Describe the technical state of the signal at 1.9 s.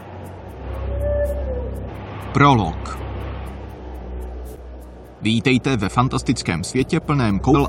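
Damaged data in the compressed stream at 1.87 s throws the decoder off its frames until it resyncs, leaving a brief chirp or blip in the sound.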